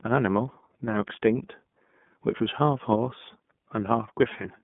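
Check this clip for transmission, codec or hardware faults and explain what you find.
The speech has one fault, present from start to finish: iLBC codec coding. The narrowband codec codes each 30 ms frame's excitation independently, which fits its 13.33 kbps mode. Only about 150 Hz to 3.5 kHz survives, with nothing above 3.7 kHz, and the speech sounds plainly rough and synthetic. On a spectrogram, energy stops at a hard ceiling near 3.7 kHz.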